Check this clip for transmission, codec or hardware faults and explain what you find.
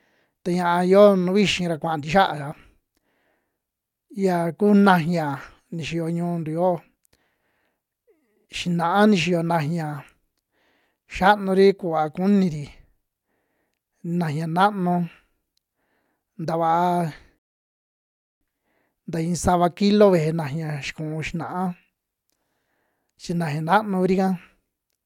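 One fault is present: a rebuffering stall in this speech clip. From 17.39 s to 18.41 s the sound drops to silence for about 1.02 s, then picks up exactly where it left off. The player exhausted its downloaded audio and waited for more data before continuing. What separates this from a dropout is that nothing is missing: the speech resumes mid-flow with no skipped material, so the gap adds time rather than removing sound.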